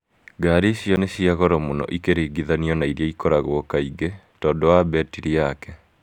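At 0.96 s, a 10 ms run of samples was replaced with zeros, leaving a block of digital silence just before "nĩ cia goro mũno". The signal cuts to zero and back without any fade, and this short gap is heard as a tick or dip rather than as silence.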